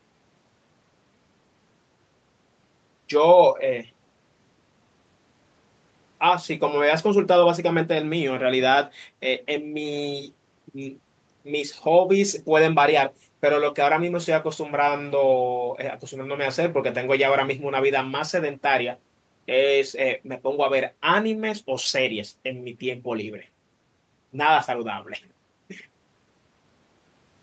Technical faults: none

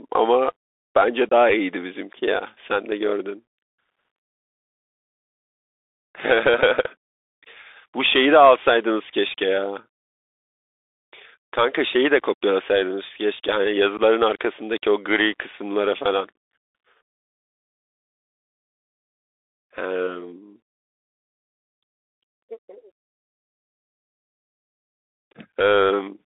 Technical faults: Bluetooth CVSD headset codec; unconcealed Bluetooth headset packet loss

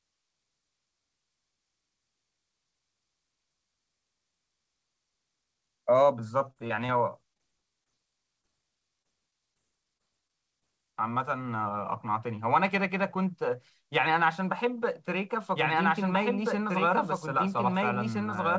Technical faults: scattered short gaps; doubled audio track

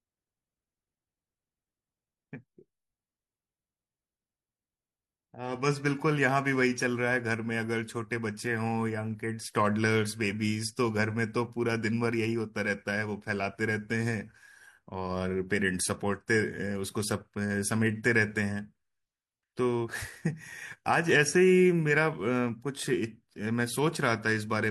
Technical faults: none

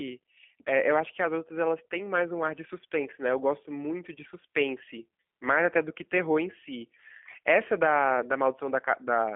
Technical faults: G.729 codec; VoIP packet loss concealed by the speech codec

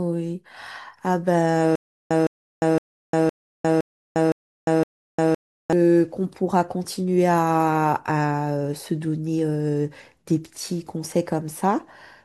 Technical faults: stutter with silent gaps

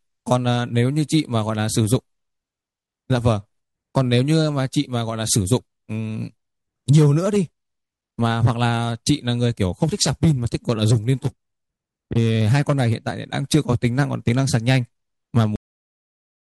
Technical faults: cut-off end

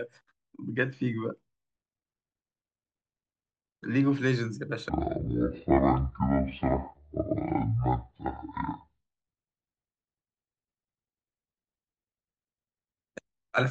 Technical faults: section at the wrong speed

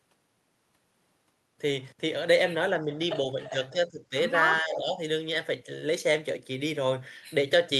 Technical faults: speech suppressed in double talk

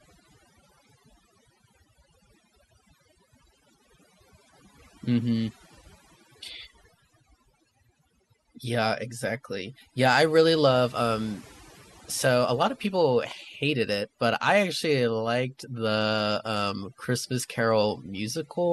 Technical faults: overdone noise removal

